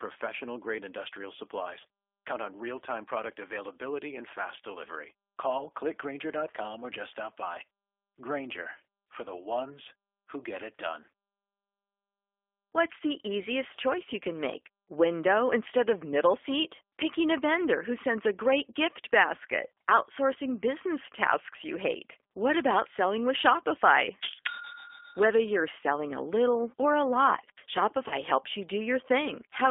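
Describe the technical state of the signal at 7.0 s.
At 7.0 s the speech is passing through a G.729 codec, as it is for the whole clip. The sound fits the 8 kbit/s G.729A variant. The voice is rebuilt from a vocal tract filter, a pitch predictor and a few pulses per 10 ms frame, inside a telephone band of 300 Hz to 3.5 kHz. The result is thin and band-limited, with a plainly audible rough, synthetic quality.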